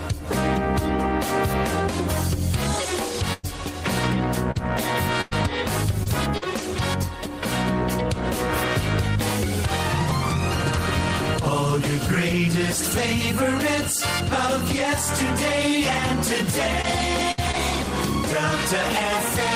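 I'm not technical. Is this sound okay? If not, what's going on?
No. From 3.33 to 6.60 s and again from 16.82 to 17.55 s there is repeated packet loss (robotic sound). Chunks of audio kept going missing, and each hole was patched by stretching the last bit heard, so those stretches sound choppy.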